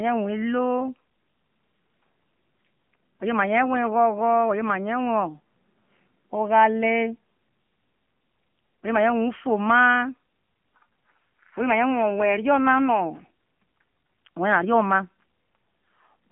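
Speech, heard throughout as thin, boxy telephone sound with nothing above 3.4 kHz and little below 150 Hz, plus a plainly buzzy, synthetic edge. That points to the AMR narrowband mobile codec, its vocal-tract model rebuilding the voice from sparse pulses, which fits the 7.4 kbps mode.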